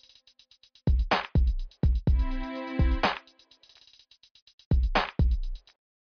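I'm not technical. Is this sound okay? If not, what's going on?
Yes, this sound is okay, and nothing is going wrong in it.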